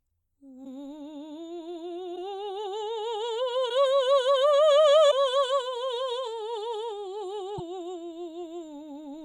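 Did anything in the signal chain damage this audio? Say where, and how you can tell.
Yes. Short glitches break the music at 0.64–0.67, 2.15–2.18, 3.69–3.71, 5.10–5.13 and 7.57–7.60 s, each about 28 ms long, with 24 ms frames. That points to the codec, likely a broken MP3 bit reservoir: after missing frames, the decoder reads the wrong frame's bytes.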